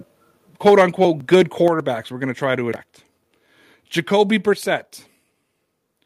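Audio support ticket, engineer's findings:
Microphone overload, 0.66–1.05 s: harsh, crackly edge on the loudest syllables, peaks squared off. Likely mic input gain set too hot, driving peaks about 7 dB past the converter ceiling, so a few percent of samples get flattened. Same thing again at 1.33–1.68 s, milder: peaks about 4 dB over, roughly one percent of samples clipped, still audible grit on the loud bits.

Microphone volume stepped down, 0.68 s: sudden level drop of about 2 dB, voice and background together, right as the first overload starts. Likely the call software's auto gain control pulling the device input down a notch after seeing clipping. Again at 1.68 s, about 5 dB, just as the second overload ends. One more at 4.53 s, another about 5 dB cut.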